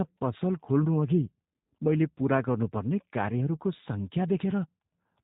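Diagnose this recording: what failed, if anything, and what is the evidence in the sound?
The speech sounds band-limited and plainly degraded from start to finish, with nothing audible above 4 kHz, and vowels carry a rough, slightly synthetic edge that stays constant rather than coming and going. The failure sits at the codec stage: G.729 codec compression, which fits an 8 kbit/s VoIP link. Each 10 ms frame is rebuilt from a vocal tract filter, a pitch predictor and a handful of pulses, so fine spectral detail and natural breathiness are lost.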